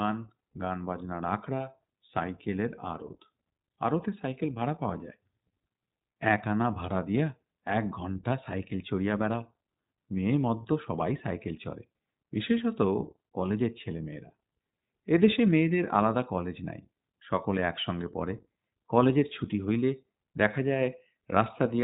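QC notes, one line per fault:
Throughout, iLBC codec. Nothing above 4 kHz survives. Independent 20 ms frames, fitting a 15.2 kbps mode, make the speech plainly rough and synthetic.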